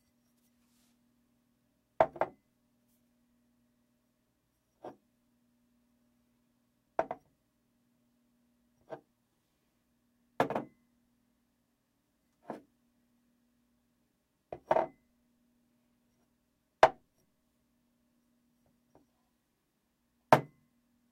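No technical faults are audible anywhere in the recording of everyday sounds.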